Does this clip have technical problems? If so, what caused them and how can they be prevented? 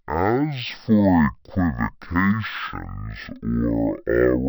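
Yes. The speech plays throughout at half speed and a full octave low, the sign of stereo read as mono: alternating left and right samples were taken as one continuous channel, doubling the apparent length and halving every frequency. On a spectrogram the harmonics sit squeezed into the lower half, with a fainter mirrored copy in the upper half; the waveform looks stretched. Preventing it means reading the channel count from the file header and de-interleaving before playback.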